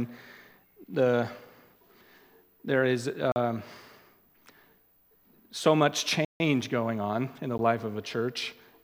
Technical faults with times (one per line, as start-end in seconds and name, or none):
3.32-3.36 block of digital silence
6.25-6.40 block of digital silence
7.58 block of digital silence